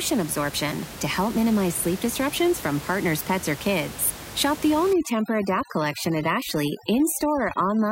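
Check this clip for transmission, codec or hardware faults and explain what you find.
One fault shows up: overdone noise removal from 4.93 s, just after "the all", to the end. An over-aggressive noise reducer mutes bands near its noise estimate, leaving twinkling near-silence where room noise about 14 dB below the speech sat.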